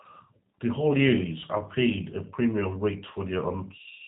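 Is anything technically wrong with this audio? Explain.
Yes. Throughout the clip the speech sounds narrow and slightly rough, with a buzzy, synthetic edge and no brightness at all, because it has passed through the G.729 codec, plainly audible here and consistent with the G.729A variant at 8 kbit/s. That codec models each 10 ms frame as a vocal tract filter, a pitch predictor and a handful of pulses rather than the actual waveform, so fine detail is replaced by an approximation, and everything above 4 kHz is gone.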